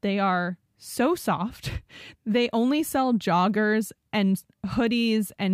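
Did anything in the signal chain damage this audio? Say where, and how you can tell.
No, nothing along the chain seems to have harmed this speech recording, and there's nothing in it that points to a stage going wrong.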